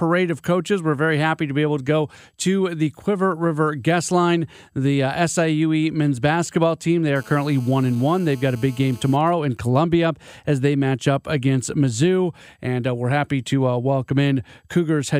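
GSM phone buzz runs from 7.16 to 9.17 s: a nearby 2G phone in a call bursts 217 times a second, and the rectified pulses give a steady, raspy buzz about 26 dB below the speech. GSM signalling bursts follow from 9.21 to 10.05 s, just before "as they match up": with the talker silent, the phone sends only sparse burst groups, heard as faint even ticks with a longer 217 Hz buzz twice a second.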